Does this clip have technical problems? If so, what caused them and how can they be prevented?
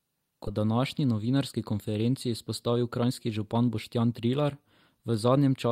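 Yes. At about 0.47 to 0.60 s there is a skip ahead: roughly 0.4 s of speech never plays, and the two sides are spliced almost directly, with no silence or concealment filling the join. Later speech was already queued, and the missing stretch was discarded in transit or when the jitter buffer overflowed. This differs from a dropout, which leaves a gap or smeared fill; here the speech simply lurches forward. A larger jitter buffer ceiling and steadier network delivery would prevent this.

From 1.04 to 1.58 s and again from 2.68 to 4.20 s, the jitter buffer speed-up runs speech at about 109% of normal rate. The buffer had grown past its target, so the receiver repeatedly cut short pitch-period-sized pieces, removing roughly 50 ms and then roughly 150 ms. Unlike resampling or a pitch-shift fault, the voice keeps its pitch and only sounds hurried over those stretches. Reducing packet bunching and delay spikes on the network would keep the buffer near its target.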